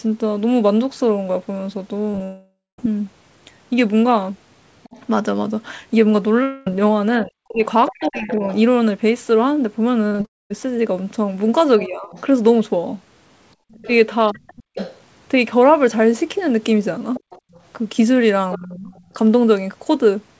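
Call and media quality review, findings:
Short concealed packet loss, 2.12–2.14 s, 2.16–2.18 s, 2.18–2.20 s: brief smears or wobbles as the decoder extends the last sound over 10–20 ms holes. Blends back into real speech, unlike a dropout.

Long network dropout, 2.23–2.79 s, 6.43–6.67 s, 10.25–10.51 s: concealment buzz fading out, with about 0.2 s of near-silence at 2.23 s and 10.25 s. Likely jitter-buffer starvation. Speech resumes with a stretch missing.

Other side's voice leaking through, 4.83–8.57 s and 11.83–18.99 s: second voice roughly 15–20 dB under the talker. Likely residual echo from incomplete echo cancellation. A separate voice is audible, not a damaged one.

Speech suppressed in double talk, 7.24–8.43 s and 11.86–19.15 s: the talker's speech dips up to about 40 dB or cuts out in pieces while the leaked voice plays. Likely over-aggressive echo suppression. The talker is lost, not the network.

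Repeated packet loss (robotic sound), 10.07–10.25 s: choppy run of closely spaced gaps up to 40 ms, nearly half concealed. Repeated rather than single, and runs straight into the 10.25 s dropout.

Background gated by the echo canceller, 13.55–13.74 s and 17.41–17.52 s: room tone drops about 26 dB, then about 36 dB, for 0.1–0.2 s. Canceller clamps the microphone during loudspeaker playback.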